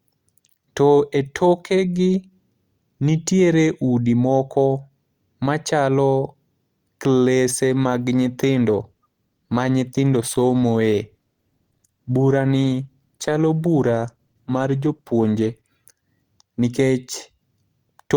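From 7.64 to 15.64 s, an adaptive stream at a lower bitrate, fitting a 16 kbit/s Opus step, makes codec artefacts rise. The quality changes suddenly, with no waveform gap.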